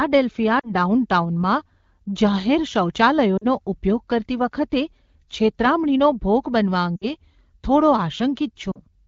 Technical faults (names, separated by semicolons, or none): lost AMR speech frames